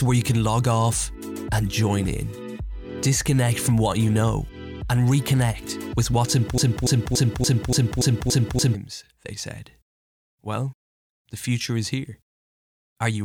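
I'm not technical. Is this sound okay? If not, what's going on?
No. From 6.58 to 8.75 s, a 0.29 s piece repeats eight times: a broken-record loop, likely a stalled player, encoder or stream.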